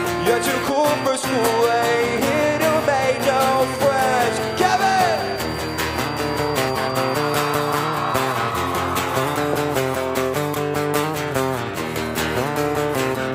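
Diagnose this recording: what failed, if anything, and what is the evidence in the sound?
The loop between loudspeaker and microphone is likely sitting just short of feedback in the analogue path. This feedback whistle is a thin, steady 4.7 kHz tone, roughly 20 dB below the signal, swelling and fading slowly from the start until 8.56 s.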